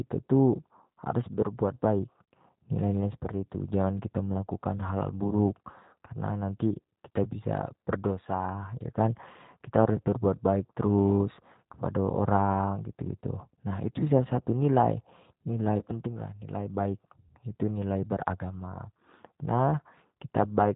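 From start to end the speech carries G.729 codec damage, and it is plainly audible. The codec does not store the waveform. It rebuilds each 10 ms frame from a vocal tract filter, a pitch predictor and a few pulses. The result sounds rough and slightly synthetic. Nothing above 4 kHz survives, so the top end is gone. The coarseness fits the 8 kbit/s rate of the G.729A variant.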